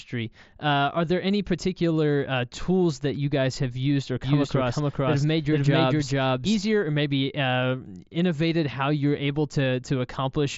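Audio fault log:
4.24–6.60 s doubled audio track: an equally loud, dry copy trails about 0.4 s behind and starts and stops abruptly, likely from a slower second capture path.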